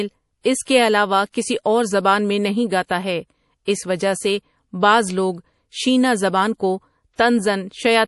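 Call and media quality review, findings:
Watery, swirly speech throughout, dull top end with nothing above 11.5 kHz, sibilants chirpy and metallic, plainly audible. Likely MP3 compression, with the sound pointing to a low bitrate around 48 kbps. Encoder starved of bits, hard treble cut, weak frequency lines dropping in and out frame to frame.

Pre-echo, four events: short hiss smearing onsets. 0.41–0.45 s, 39 ms. 0.62–0.67 s, 49 ms, just before "کے علاوہ کسی اور". 2.85–2.90 s, 50 ms, between "اور زبان میں نہیں" and "ہے اس وجہ سے". 3.65–3.68 s, 25 ms, just before "اس وجہ سے بعض". Transform codec block, quantisation noise spread ahead of a late attack.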